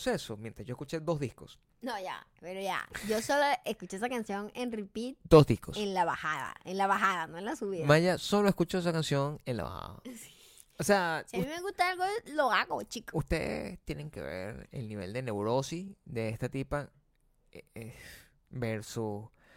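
A speech recording with no technical faults to report.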